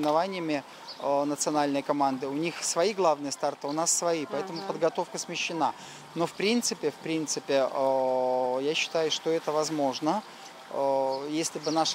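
Nothing stood out on listening to this audio.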